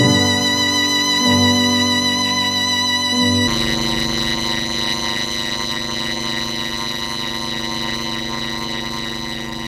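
A block size mismatch (padded) runs from 3.47 s to the end of the clip. From that point a buzz at 100 Hz sits on the audio, and the sound plays at about 0.53 times its proper speed while keeping roughly its normal pitch. One stage writes 256 samples into a larger block that the next stage reads, and the remainder of every block is filled with silence. The ratio points to blocks of about 480 samples.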